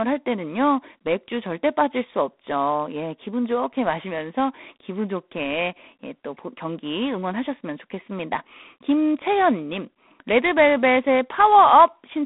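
From start to finish the speech carries a harsh, rasping hiss that swells and fades with its level, over a narrow telephone band of about 200 Hz to 3.6 kHz with nothing above 3.8 kHz. This is G.726 ADPCM. Each sample is sent as a few bits of difference from an adaptive prediction, and the coarse quantisation fits the 24 kbit/s mode. The plainly audible grit comes from those prediction errors tracking the signal.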